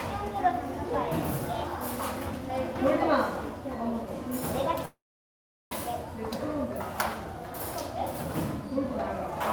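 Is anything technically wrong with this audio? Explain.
Yes, there's a call audio freeze from 4.85 to 5.73 s. The last sound carries on briefly as a fading buzz or hiss, then about 0.75 s of silence. It then resumes where it stopped, with nothing lost but everything running 0.86 s late. That's likely held-up packets draining the jitter buffer.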